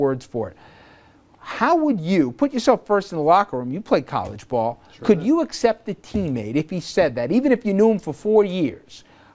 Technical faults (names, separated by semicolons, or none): none